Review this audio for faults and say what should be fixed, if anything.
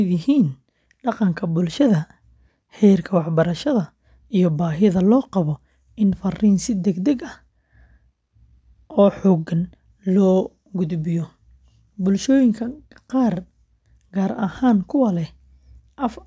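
Nothing in this recording needs fixing. No faults can be heard at any point in the speech, so no correction is called for.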